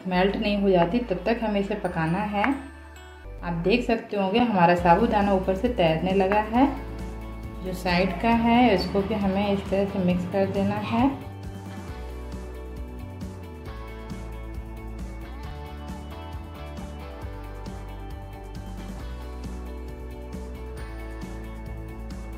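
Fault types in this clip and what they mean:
Block of digital silence: at 3.38 s, 4.39 s and 15.51 s the audio drops to silence for 5.8 ms and returns with no fade, a gap length that fits a 256-sample output buffer left unfilled. Each is heard as a short tick. On the waveform it appears as a near-flat line close to zero with vertical edges. On a spectrogram it is a thin empty column.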